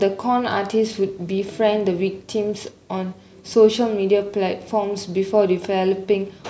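No technical faults can be heard anywhere in the speech. There is no event in the recording that calls for a timestamp or a closer look.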